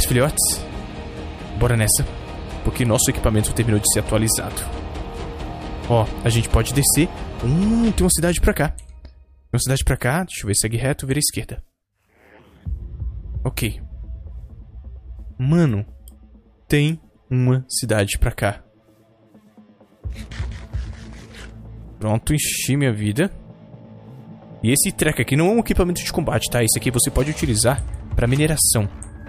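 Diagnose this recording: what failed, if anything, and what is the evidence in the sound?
Nothing failed in this recording, and the sound gives no evidence of any fault.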